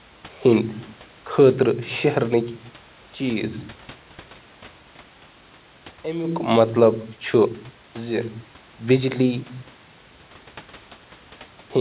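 Nothing stood out on listening to this recording.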